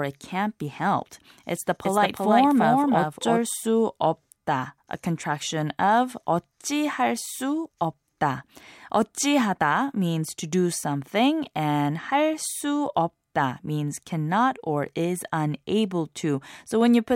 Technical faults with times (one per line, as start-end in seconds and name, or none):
1.85-3.39 doubled audio track